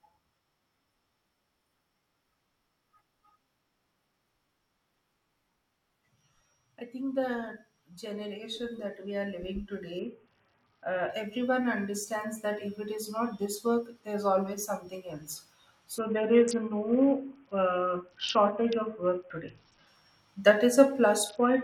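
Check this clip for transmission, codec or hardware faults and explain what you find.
Three episodes of a Bluetooth SBC bit pool drop affect this speech. They run from 9.99 to 11.10 s, ending just before "everyone understands"; from 15.98 to 19.87 s, starting after "there's always something else"; and from 21.29 s to the end. Each time the link throttled the encoder from a bit pool of around 31 down to about 6, roughly 55 kbps. The upper sub-bands are starved of bits and the rest are coarsely quantised, so the speech turns dull and gritty until the rate recovers.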